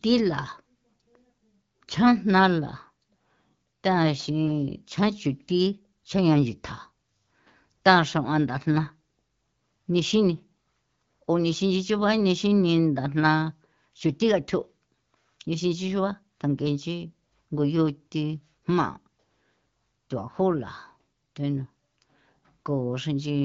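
Speech over AMR wideband; no technical faults heard.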